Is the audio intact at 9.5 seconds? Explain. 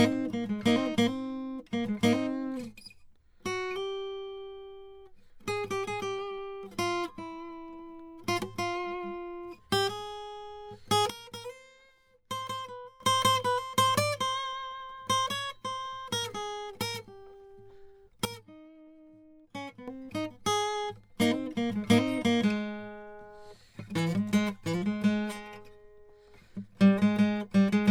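No. At 9.5 seconds, as throughout the music, there is generation loss. The sound is swirly, smeared and hollow, and attacks are blurred. The likely cause is repeated lossy coding, about seven passes, which fits an MP3 chain near 128 kbit/s. Each pass quantises again on a shifted frame grid, so noise and gaps accumulate. A spectrogram shows patchy, flickering holes in the upper bands and smudged onsets, with nothing above 20 kHz.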